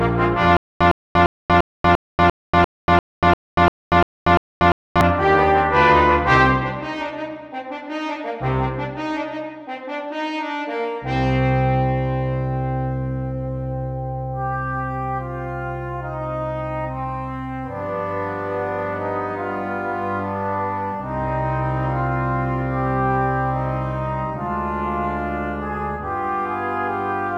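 From 0.57 s to 5.01 s there's a stutter with silent gaps. A short burst of about 108 ms keeps coming back, twelve times, each followed by roughly 238 ms of dead digital silence, so it ticks along at an even 346 ms cycle. It's likely the player or stream stalled and replayed its last fragment on every retry before running dry, and whatever should have played across those seconds is simply gone.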